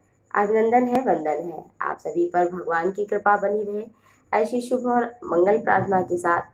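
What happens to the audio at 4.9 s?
Nothing goes wrong at 4.9 s; the audio plays through that moment intact, with no dropout, click or distortion.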